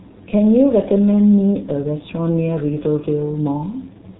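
From start to finish the speech carries heavy G.723.1 codec damage. Nothing gets through above about 3.9 kHz, so it's muffled, and the slow-updating voice model leaves it hoarse with smeared consonants, which fits a low rate around 6 kbit/s.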